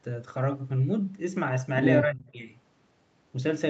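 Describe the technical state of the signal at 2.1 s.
At 2.1 s the speech sinks by about 25 dB at its deepest, for roughly 200 ms in total between 2.04 and 2.36 s. The likely cause is speech suppressed in double talk: an echo canceller, facing both sides at once, took this talker for echo and attenuated it.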